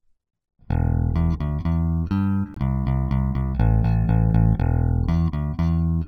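Sample clock jitter runs through the whole clip. The converter's clock wavers by a few microseconds, so each sample is captured slightly early or late at random. The timing error matters most where the waveform changes fastest, which leaves a faint roughness or hiss about 50 dB below the signal. It swells on loud, bright passages and disappears when the sound drops away, so it follows the audio instead of sitting underneath it as a steady floor.

From 2.54 to 2.57 s there is a gap between stream segments. The time stamps of two consecutive segments leave about 21 ms unaccounted for, and the player fills that space with silence. The result is a brief, hard-edged hole cut cleanly into the sound, a sudden dropout with no fade on either side. Nothing is actually missing from the audio. The later material is simply pushed back by the length of the gap.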